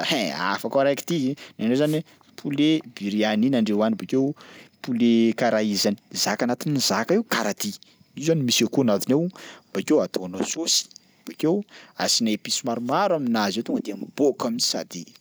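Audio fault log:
1.82–2.00 s, wireless microphone noise hit: a brief swish of static washes over the speech as the radio link fades and receiver noise rises.
3.98–4.56 s, 8.28–8.99 s, 13.62–14.20 s, drift correction step: speech slows 6.26% and drops 112 cents twice, then speeds 6.26% and rises 105 cents, each snapping back. This is likely a clock-matching playback rate change.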